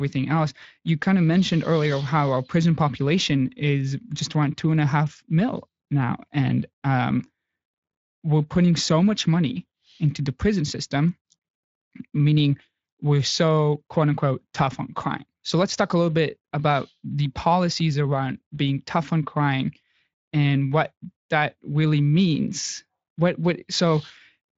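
Nothing stood out on listening to this speech, which passes through a Speex codec path with its content ending a little below 7.6 kHz.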